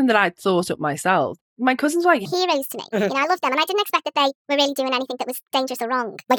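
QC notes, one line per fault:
2.25–6.38 s, section at the wrong speed: from 2.25 s to the end the speech runs at 1.56 times its recorded rate, so syllables come hurried and clipped, and pitch jumps up by roughly seven semitones at the same instant, giving a thin, chipmunk-like timbre. Because speed and pitch shift together rather than independently, this is a playback-rate error, not a pitch effect, likely from this portion being clocked at the wrong sample rate during editing or playback.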